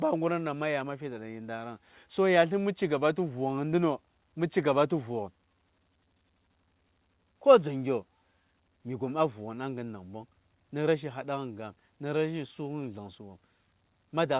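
Nothing in this speech goes wrong at any point, and the only thing of note is the narrow call-line sound of the WebRTC path, with nothing above 4 kHz, which fits a G.711 A-law codec at 64 kbps.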